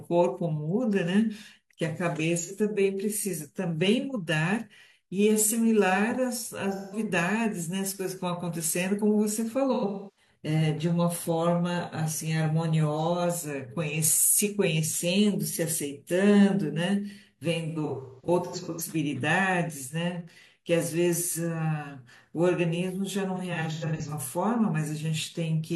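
Smeared, noisy, phasey patches break into the speech at 2.38–2.51, 6.75–6.99, 9.73–10.28, 17.68–18.81 and 23.35–24.13 s. This is AAC frame loss with concealment: the decoder rebuilds missing frames from the last good spectrum.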